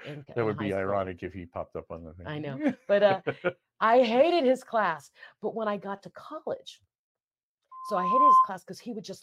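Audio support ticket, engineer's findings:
Loudspeaker feedback squeal, 7.71–8.51 s: 1 kHz tone swells over about half a second to roughly 10 dB above speech. Mic–speaker loop gain above unity. Growth, not a fixed tone, rules out interference.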